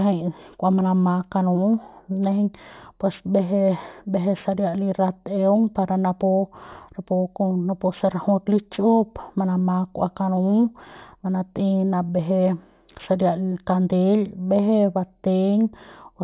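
Throughout the speech, the audio shows aliasing. The rate was cut without an anti-aliasing filter first, which fits a drop from 44.1 kHz to 8 kHz. Energy above the 4 kHz fold point was not removed and reflects back down into the band as false, unrelated frequencies, sitting roughly 35 dB below the speech. Sibilants come out gritty and metallic, and the spectrum stays dense right up to the 4 kHz edge.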